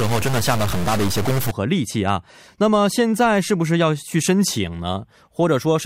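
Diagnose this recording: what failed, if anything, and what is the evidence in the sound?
Harsh, buzzy distortion sits on the speech from the start until 1.51 s, and the gaps between syllables in that stretch fill with a gritty noise floor instead of dropping to silence. That points to a stuck bit, most likely at the converter or in the digital wiring into it. One bit of fairly high weight, with a step of roughly -20 dBFS, holds a fixed value, so about half the samples are pushed off by that amount in a waveform-dependent pattern.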